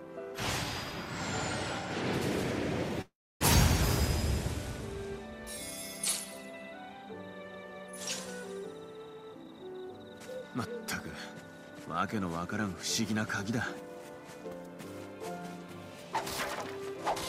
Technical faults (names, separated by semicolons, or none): call audio freeze; jitter buffer speed-up